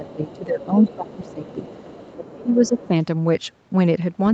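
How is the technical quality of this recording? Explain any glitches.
The recording has two recurring call-related faults. Both trace back to the other party talking at the same time. The speech tops out around 8 kHz, which fits a wideband call codec such as Opus at a moderate rate.

Speech suppressed in double talk happens three times: 0.00 to 0.75 s, 0.96 to 1.67 s and 2.14 to 2.92 s. The talker's level sinks by about 15 dB in the first two stretches and about 25 dB in the last, so the voice turns faint and patchy. The likely cause is an echo canceller that couldn't separate the talker from loudspeaker echo and turned everything down. This differs from a plain dropout or gain change because the dips line up with the other voice being present rather than falling at random.

The other side's voice leaking through appears at 0.25 to 0.38 s, 0.61 to 2.16 s and 2.49 to 2.88 s. A second, quieter voice sits about 20 to 25 dB below the talker, as brief scraps at first and then as a longer stretch. 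The likely cause is far-end audio from the loudspeaker that the echo canceller didn't fully remove from the microphone. Unlike room reverberation, this is a separate voice rather than a smeared tail of the talker's own sound.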